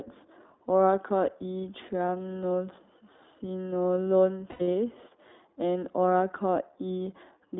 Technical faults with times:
0.00-7.60 iLBC codec
4.51-4.68 lost iLBC frames

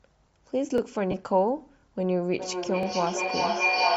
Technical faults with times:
0.00-3.96 Bluetooth LC3 compression
0.78-0.81 overlapping chunks
1.11-1.14 lost LE Audio frames
1.81-1.83 overlapping chunks
2.37-3.96 feedback echo between two devices
2.83-2.86 overlapping chunks

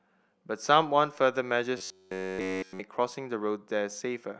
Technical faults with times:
1.77-2.79 robotic sound from repeated short buffers

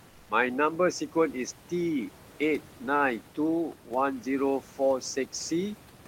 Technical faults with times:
0.09-0.29 comfort noise in place of the background

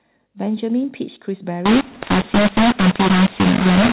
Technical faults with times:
1.66-3.92 mu-law and A-law mixed up

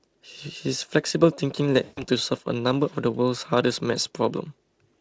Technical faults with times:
1.83-2.02 VoIP packet loss concealed by the speech codec

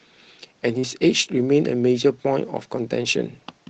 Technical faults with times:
0.79-0.86 short concealed packet loss

